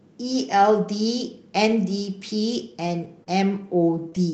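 Speech, with scattered short gaps between 1.69 and 4.16 s. About four tiny packet losses, none longer than roughly 20 ms, were each patched by stretching the preceding sound, so you hear brief ticks or smeared hiccups. On a spectrogram these appear as thin vertical smears where the harmonics freeze or blur for an instant. The waveform shows small kinks or repeated cycles at each join. The call path's codec band-limits the audio, with nothing above 8 kHz, which fits Opus.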